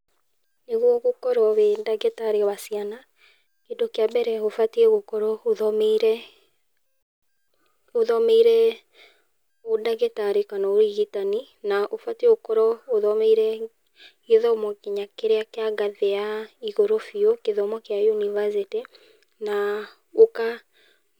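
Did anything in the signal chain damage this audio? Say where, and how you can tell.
No, nothing in the signal chain stood out on listening as having damaged this speech recording.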